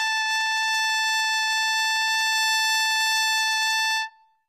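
A short music clip with plainly audible HE-AAC compression damage running from start to finish. The treble sounds synthetic: cymbal-like and sibilant content turns gritty and metallic, because the upper band is rebuilt by copying lower bands upward rather than coded directly, so harmonics no longer align above the crossover. A spectrogram would show repeated, smeared patches in the highs and nothing above 14.9 kHz. This fits HE-AAC v2 at roughly 20 kbps as the likely cause.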